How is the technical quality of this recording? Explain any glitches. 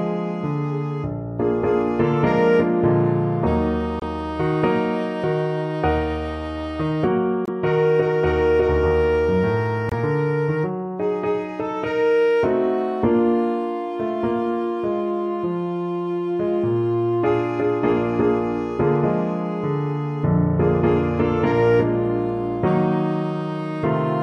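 The recording has three short dropouts, all the same fault: corrupt frame muted. Near 4.00 s, 7.45 s and 9.89 s the sound cuts to silence for about 42, 34 and 36 ms. Damaged compressed frames were rejected by the decoder, and the player inserted silence in their place. The lengths fit two, two and one frames. Each gap starts abruptly and is truly silent, not smeared or patched, and the timing around it stays intact.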